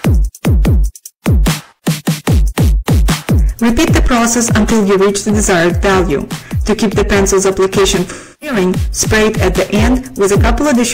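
The whole clip is hard clipped: it's being driven about 16 dB past what some stage can pass, so something like a third of the samples get cut flat, and every loud moment turns into a harsh fuzz from all the extra high harmonics. Then from 8.11 to 8.56 s there's AAC frame loss with concealment. Roughly 0.3 s of data went missing, which fits a run of about seven lost frames. The decoder patches the gap from the last good spectrum, so that stretch comes out smeared and noisy.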